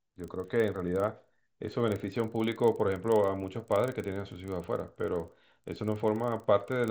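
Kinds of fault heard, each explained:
Resampler restarted on every block, throughout the clip: a steady tick repeats 25 times per second, fusing into a buzz under the speech that drops away in the pauses. That rate matches 40 ms blocks, each converted separately in a conversion from 16 kHz to 48 kHz. At every block boundary the interpolation filter lacks the true neighbouring samples, so each edge leaves a small discontinuity that is audible only while signal is present.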